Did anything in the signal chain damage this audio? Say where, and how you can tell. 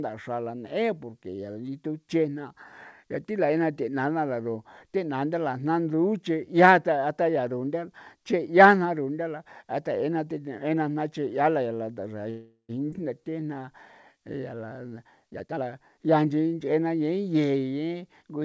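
Yes, the damage is in the network and call-buffer stage; the G.722 codec path itself cuts everything above 8 kHz, visible as a flat spectrogram ceiling.

Call audio freeze, 12.30 to 12.71 s: the last sound smears into a fading buzz, then about 90 ms of silence, likely a jitter buffer that ran dry from held-up packets. It appears as a smooth horizontal streak in the spectrogram.

Skip ahead at 12.91 to 12.94 s: roughly 200 ms of audio vanishes and the two sides butt together, showing as an abrupt waveform splice without a gap.

Jitter buffer slow-down at 13.21 to 13.71 s (85% speed) and 14.13 to 14.88 s (90%): repeated pitch periods stretch sounds at unchanged pitch, visible as elongated, regularly repeating cycles.

Jitter buffer speed-up, 15.30 to 17.02 s: cut pitch periods remove roughly 400 ms, running at 122% speed at the same pitch; spectrogram events look compressed and crowded.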